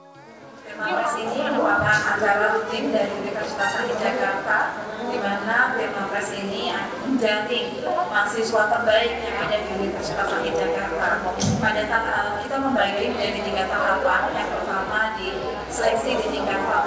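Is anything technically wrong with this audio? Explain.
No, there's nothing wrong here; it sounds like an ordinary call over a WebRTC path, where the G.722 codec at 64 kbps leaves nothing above 8 kHz, which is simply how that codec works.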